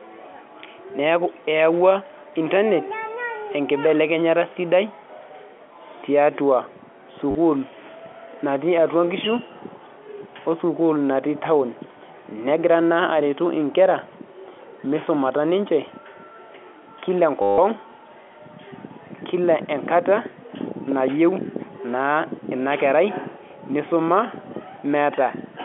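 Packets were lost at 7.31 to 7.35 s and 17.42 to 17.58 s, and the last one replayed (packet loss with last packet repeated). This causes a robotic stutter that buzzes near 100 Hz.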